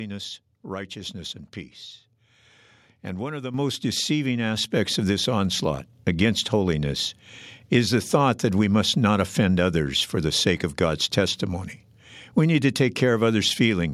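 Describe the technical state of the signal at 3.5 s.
At 3.54 s, right after "one of the", the microphone volume is stepped up: the input gain on the capture device is raised in a single jump of about 8 dB. Speech and background noise become louder together, with no fade. On a waveform the envelope widens abruptly at that point and stays wider. On a spectrogram every frequency band brightens at once, leaving a clean vertical boundary, and the noise floor between words is visibly raised as well.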